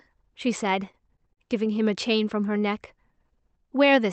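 Between 0.85 and 1.77 s the speech shows repeated stalls (stutter): nine brief hitches in which the jitter buffer ran dry because packets arrived late, so the receiver stretched the last sound until data resumed. The longest hold is 40 ms, about 113 ms in total. Unlike packet loss, nothing is dropped. The sound drags and catches but stays complete, through an Opus call path whose top end stops near 8 kHz.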